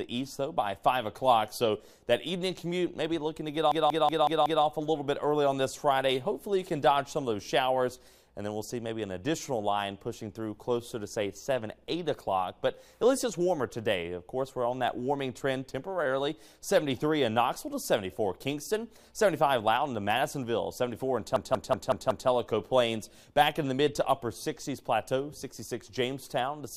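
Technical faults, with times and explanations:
3.72–4.64 s and 21.36–22.29 s, system hang loop: the system stalled while the audio hardware kept replaying its ring buffer, so a 186 ms slice repeats exactly five times at about 5.4 per second, a machine-gun stutter. That length fits an 8192-sample buffer. Almost no audio is lost.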